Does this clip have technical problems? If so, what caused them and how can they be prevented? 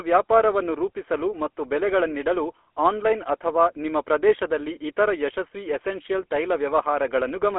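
Yes. Throughout, the speech passed through a GSM full-rate codec, consistent with a 13 kbps mobile link, which rebuilds the voice from a vocal-tract model driven by sparse regular pulses. That leaves a plainly audible buzzy, gravelly roughness, a 300 Hz to 3.4 kHz telephone band, and nothing above 3.6 kHz. To prevent it, record or transmit over a wideband, higher-bitrate path instead of a GSM full-rate call.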